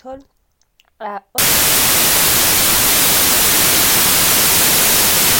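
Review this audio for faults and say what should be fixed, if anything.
From 1.38 s to the end at 5.40 s, the speech gives way to loud, harsh broadband noise, and that's samples built from the wrong bytes. The reader is assembling each sample with its bytes mismatched, whether by a one-byte offset, a swapped order or the wrong alignment, so the busy low-order bits end up as the big part of every value. To prevent it, make sure the decoder's byte order and sample alignment match the format the audio was actually written in.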